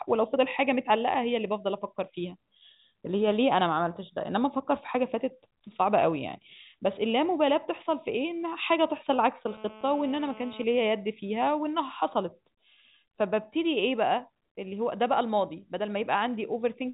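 A nearby 2G handset on a call radiates bursts about 217 times a second, which the audio circuitry rectifies. From 9.47 to 10.64 s this GSM phone buzz appears as a steady, raspy 217 Hz drone rich in harmonics, about 20 dB below the speech, cutting through the telephone band that stops near 3.8 kHz.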